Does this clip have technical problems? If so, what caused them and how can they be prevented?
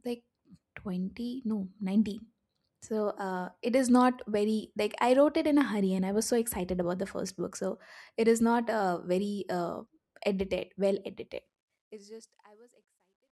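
Yes. Truncation distortion on the fade-out begins at 11.36 s, just after "very uh edited well", and lasts to the end. The quiet tail turns gritty. From 12.42 s it is at its worst. The fade kept too few bits, which fits a 12-bit stage, and added no dither. To prevent it, process fades at high resolution and apply dither before reducing bit depth.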